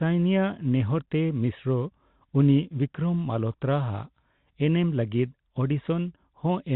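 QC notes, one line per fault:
No fault to note, so there is no line per fault for this speech clip.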